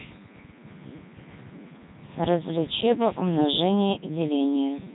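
From the first moment to the last, the speech carries the signature of the Codec 2 vocoder, and the damage is heavy. The sound is rebuilt from sine waves driven by pitch, voicing and a coarse spectral envelope, so it comes out robotic and buzzy, with nothing above 3.9 kHz, which fits the top 3.2 kbit/s mode. Unlike a waveform codec's smearing or warbling, the original waveform is gone entirely, leaving a synthetic, machine-like tone.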